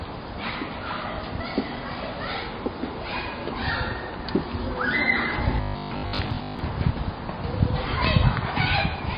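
Throughout the recording, the audio shows plainly audible MP3 compression damage, likely from a starved encoder at a rate that fits roughly 24 kbps. Weak spectral detail flickers between frames, giving a watery, swirling texture with smeared attacks.

From 5.57 to 6.59 s, the sound turns into a robotic sound from repeated short buffers: a rigid, metallic 50 Hz buzz. Each repeat lasts 20 ms, likely because fresh audio arrived too seldom and playback looped the last buffer, so most of this stretch is repetition rather than new material.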